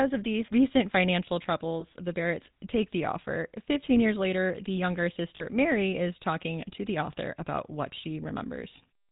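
This is a speech clip run through the GSM full-rate codec, and it's plainly audible: the voice has that buzzy, gravelly edge from the coarse pulse-driven excitation, and nothing above 4 kHz gets through, which fits the 13 kbps full-rate coder. There are also lost GSM frames at 1.80–1.85 s and 5.36–5.44 s. In each gap the decoder just reuses the last good frame's settings, so the sound smears into a short rough, metallic ring. The second gap is the longer of the two.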